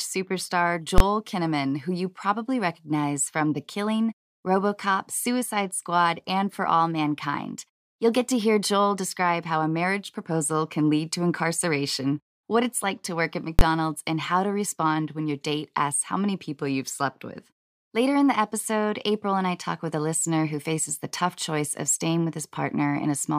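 At 0.98 to 1.00 s and again at 13.59 to 13.61 s the speech is interrupted by a single hard bang, the signature of invalid numbers at full scale. A calculation has produced infinite or undefined values, and these were clamped to the maximum positive or negative level, pinning the output at full scale for one processing block. Each burst lasts about 21 ms, which fits a 1024-sample block. That is too short to hear as separate onset and release pops, so each one lands as one loud bang.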